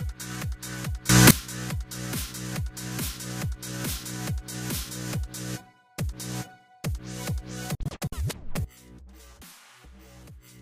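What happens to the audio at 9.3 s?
At 9.3 s the audio sits inside a sudden gain jump running from 8.65 s to the end: sound and background drop together by about 17 dB, likely from a gain change applied without a ramp.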